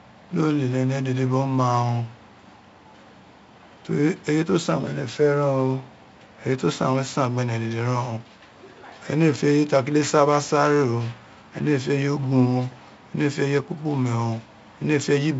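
The whole speech clip has passed through 4-bit ADPCM compression, each sample coded as a coarse step from a prediction. This leaves a gritty hiss riding every loud syllable and rough attacks. Nothing sounds above 7.7 kHz, which fits a 16 kHz rate at 64 kbps.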